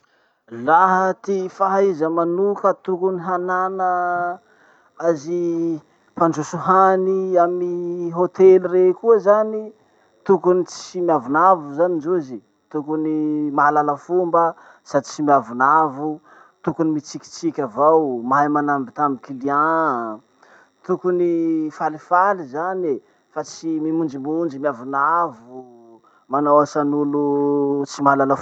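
Speech recording with no technical fault audible anywhere in it.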